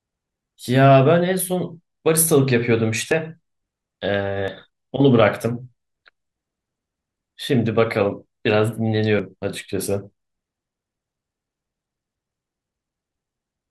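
Dropped buffers (overrun) at 3.12, 4.48 and 9.2 s: the speech jumps ahead, skipping about 20, 40 and 70 ms, likely from samples overwritten before being read.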